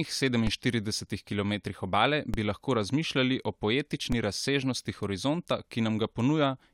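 At 0.47 s, at 2.34 s just after "kilometrih obale", and at 4.12 s between "razmišljali o" and "razsežnosti horizonta", the speech carries a DC step: the waveform's zero line jumps abruptly by about -18 to -19 dBFS. Each jump is heard as a brief low thump, with the speech itself continuing unchanged. The offset does not hold; it drains away quickly, as a 20 Hz high-pass in the chain pulls the baseline back to zero.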